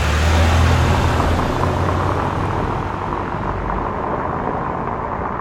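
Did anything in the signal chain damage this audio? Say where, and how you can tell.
No, the signal chain is undamaged.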